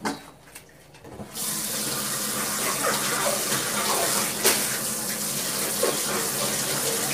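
Throughout the clip the sound is rough and grainy, with noise filling gaps in the tonal detail and a thin, dulled top end. This is heavy low-delay AAC compression, likely AAC-ELD, coded at a bitrate of around 24 kbps.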